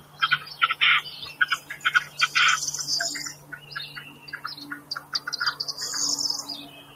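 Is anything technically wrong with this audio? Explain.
Yes. A noise suppressor built for speech was left running on this non-speech audio. It reads steady tones and ambience as noise and pulls them down, so the level swings by roughly 15 dB throughout. Sustained parts sink while sudden onsets pass, giving an unsteady, pumping quality.

The sound is cut by the noise suppressor at 0.00–0.21 s, 1.60–1.77 s, 3.33–3.72 s, 3.88–4.39 s, 4.79–5.28 s and 6.65–6.95 s. Each time the gate clamps down on held or decaying material, dropping it by about 9 to 12 dB, so tails thin out and vanish early.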